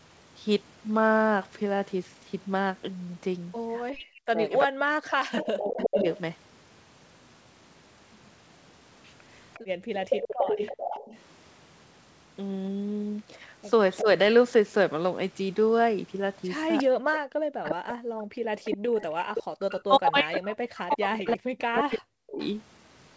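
From 3.89 to 6.06 s the talker's speech is suppressed in double talk: for about two seconds in total it dips and breaks up, at worst by about 40 dB, likely because the echo canceller could not tell the near talker from loudspeaker echo while both sides spoke. The waveform shows the envelope collapsing in chunks, and the spectrogram shows speech harmonics fading or vanishing in patches.

Overlapping this, from 5.36 to 6.02 s, is an echo leak: a copy of the speech returns 356 ms late at about 5 dB below the direct speech, likely residual loudspeaker pickup the canceller failed to remove. On a spectrogram it appears as a duplicate of the harmonic pattern, shifted right by about a third of a second.

The same echo leak returns from 9.54 to 11.18 s, again 356 ms behind and about 5 dB down.

Within it, from 9.6 to 9.91 s, the background is gated by the echo canceller: the room sound drops by 19 dB for about 300 ms, with the noise floor in the spectrogram thinning abruptly and then recovering.

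At 14.01 to 14.07 s there is a brief double-talk suppression, a dip of about 10 dB lasting roughly 70 ms. It shows as a small notch in the waveform envelope, likely the canceller clamping briefly.

From 16.78 to 22.5 s a longer echo leak runs at 356 ms delay, about 10 dB below the speech, likely the same incomplete cancellation. From 17.05 to 22.4 s, speech is suppressed in double talk again. About three seconds of it are pushed down, by as much as about 40 dB, and the waveform is fragmented into patches.

From 18.24 to 18.41 s the background is gated by the echo canceller once more, dropping by 40 dB for about 150 ms, which appears as a near-silent gap in the noise floor. Throughout the clip, nothing appears above 8 kHz, which fits the G.722 call path.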